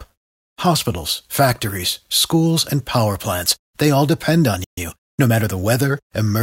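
At 4.64 s, just after "they all depend on", the player most likely ran dry of buffered data or had its output thread held up. This is a playback stall: the speech cuts to silence mid-flow for about 131 ms, then resumes at 4.78 s.

From 4.78 s to 5.64 s the player works off the backlog from that stall by trimming out small slices and cross-fading across the joins. This time-compressed catch-up runs the speech at 1.15 times normal speed, hurried but at unchanged pitch.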